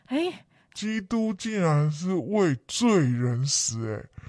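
From 0.77 s, a wrong sample rate slows the speech to 0.69 times speed and lowers pitch 6.45 semitones, which fits 32 kHz audio played at 22 kHz.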